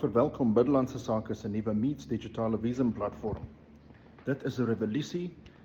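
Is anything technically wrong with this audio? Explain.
No, no technical faults detected.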